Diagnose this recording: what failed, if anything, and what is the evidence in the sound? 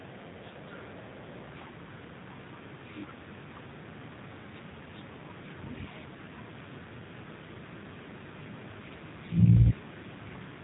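Channel delay (comb filtering) at the wiring or interface stage runs throughout. A tiny inter-channel lag, which fits a delay of a few samples, sums to mono with a first notch near 7 kHz. The notches are fixed rather than sweeping like flanging.

The G.729 codec is applied at the call-processing stage throughout. Nothing above 3.8 kHz passes, and the speech sounds rough and synthetic, which fits an 8 kbit/s frame-based codec. The damage is plainly audible, not plain filtering.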